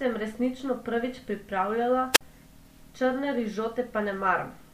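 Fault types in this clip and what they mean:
Wireless microphone squelch dropout: the radio link of an analogue FM microphone weakened until the receiver's squelch shut the output, so just after "sem resnično prvič pripravljala", at 2.12 to 2.21 s, a brief swell of hiss gives way to a near-silent hole of about 48 ms before the speech resumes. That rising static ahead of the gap sets it apart from a digital packet dropout, which cuts straight to silence with no warning noise.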